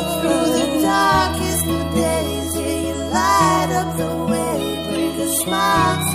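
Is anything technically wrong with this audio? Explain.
No, no technical faults heard.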